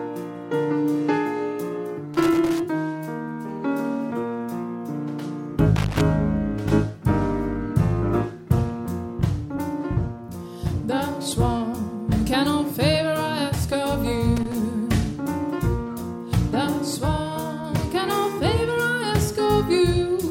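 A worn or dirty contact somewhere in the signal chain is making and breaking as it shifts, producing loose connector crackle. Each interruption chops the audio and any DC on the line adds pops, so the sound breaks into irregular bursts of scratchy crackle: from 2.14 to 2.60 s, again from 5.76 to 6.01 s, and a shorter burst from 14.37 to 14.55 s.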